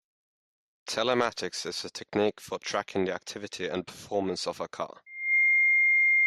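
At 5.06 s, right after "performance of a car", a loudspeaker feedback squeal starts: the microphone re-amplifies its own speaker output at 2.1 kHz, and that single tone swells over roughly a third of a second to about 10 dB above the speech, running to the end. Unlike a steady interfering tone, it grows by itself.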